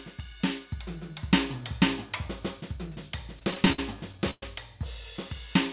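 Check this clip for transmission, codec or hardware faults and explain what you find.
One transmission fault stands out in this music clip, heard through a narrowband call path with nothing above 4 kHz. From 3.39 to 4.43 s there are repeated stalls (stutter): the music catches and drags through eight brief holds, the longest 116 ms, about a quarter of that stretch. Packets arrived late, the jitter buffer kept running dry, and the receiver stretched the last sound to fill each wait, so nothing is lost but the timing falters.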